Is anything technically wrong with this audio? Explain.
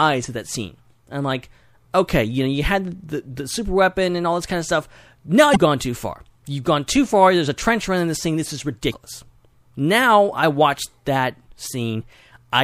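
Yes. Damaged data in a compressed stream: corrupted bytes made the decoder misread frames and lose sync, hunting for the next valid header. Each break is a brief glitch, at 5.53–5.57 s, just before "gone too far", and at 8.90–8.94 s.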